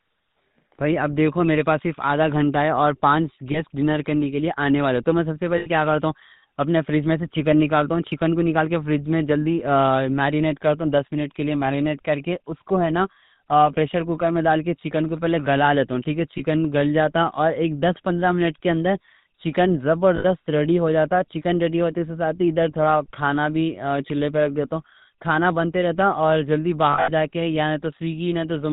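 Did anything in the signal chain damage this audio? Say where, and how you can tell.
Yes, the codec stage. The whole clip has GSM full-rate codec damage: nothing above 4 kHz, and a buzzy, gravelly roughness on the speech. That comes from a vocal-tract model driven by sparse regular pulses, consistent with 13 kbps full-rate coding.

Further down the line, lost GSM frames on the network or radio path: 3.52–3.60 s, 5.58–5.67 s, 16.38–16.41 s, 20.16–20.25 s, and a scattered cluster over 26.92–27.11 s with runs up to about 70 ms. Each gap rings metallically as the last good frame is repeated.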